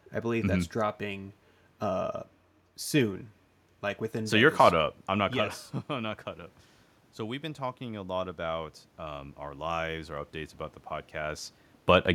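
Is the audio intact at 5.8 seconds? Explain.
Yes, the audio is intact at 5.8 seconds, with no fault at that moment.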